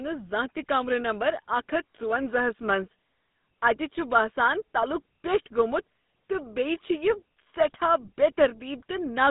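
From start to finish the speech has passed through a GSM full-rate codec, which rebuilds the voice from a vocal-tract model excited by a thinned, regular pulse train, consistent with its 13 kbps rate. The band runs from 150 Hz to 3.7 kHz, and a plainly audible buzzy, gravelly roughness coats the voice.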